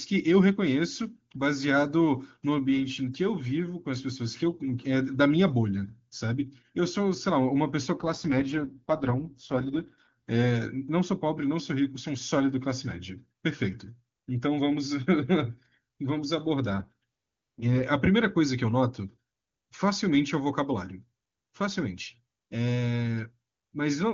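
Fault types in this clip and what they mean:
AMR rate drop: The speech turns rough and synthetic twice, from 7.98 to 10.13 s and from 16.70 to 17.84 s. The audio band stays the same and nothing drops out. The codec is giving up detail to protect its bits on a weak link. The change fits a fall from the full 23.85 kbit/s wideband rate to 6.6 kbit/s. Clear speech returns when the rate climbs back.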